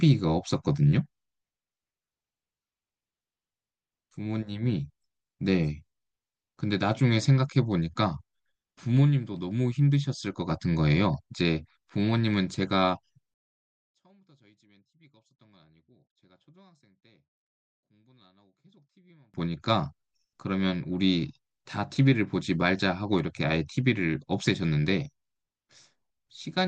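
One channel inverted, from 13.34 to 19.34 s: the speech falls by about 35 dB to a faint residue. The likely cause is reversed polarity on one stereo channel, so the centred voice, shared by both sides, cancels in a mono sum.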